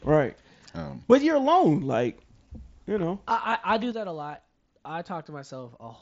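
A sudden gain jump comes at 3.92 s, right after "I do". The speech and the background noise drop together by about 7 dB in a single step and stay at that lower level to the end of the clip. Nothing fades between the two levels. The likely cause is a digital gain change applied from one sample to the next without a ramp, so the whole signal is rescaled at once. The band limit near 7.7 kHz and the faint graininess of the mSBC headset link are present both before and after the jump.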